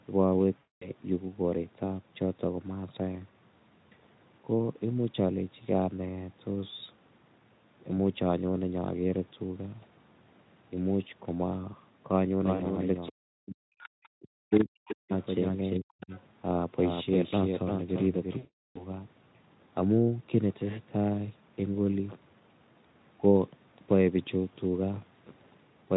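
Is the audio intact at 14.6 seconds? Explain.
No. At 14.6 seconds the speech is heard twice: a dry, full-band copy trails it by roughly 400 ms, about 5 dB quieter, with no room colour. This doubled audio track runs from 12.39 to 19.07 s and is likely a second, slower capture path mixed in alongside the first.

Between 14.16 and 15.12 s the talker's voice also dips, about 0.7 s in total and as deep as roughly 40 dB at worst. This is speech suppressed in double talk, likely an echo canceller that could not tell the talker from loudspeaker echo while both sides spoke, so it turned everything down.

From 14.51 to 14.65 s a brief scrap of another voice comes through, about 15 dB below the talker. This is the other side's voice leaking through, likely residual loudspeaker echo that the canceller failed to remove from the microphone.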